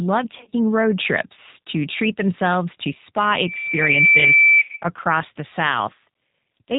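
Across the whole recording the speech has a rough, slightly synthetic grain, with nothing audible above 4 kHz and a plainly audible processed texture. This is the G.729 codec at work. It rebuilds each short frame from a vocal tract filter, a pitch predictor and a handful of pulses rather than the actual waveform, and the coarseness heard here fits its 8 kbit/s rate.

From 0.38 to 0.53 s, just before "road trips to treat", the sound breaks into short stretched fragments that sag in level, then recovers weakly. This is VoIP packet loss concealed by the speech codec. Brief gaps, none longer than about 30 ms and about 90 ms in total over 140 ms, were filled by the decoder repeating its last pitch and filter at falling gain.

At 4.59 to 4.70 s the same concealment occurs, but here the audio smears into one sustained, fading sound before the speech comes back. The loss is concentrated into a single run of about 80 ms within the 100 ms stretch. 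The decoder had to extrapolate for much longer without fresh data, so the sound decays further, and the speech sounds weak for a moment after it returns.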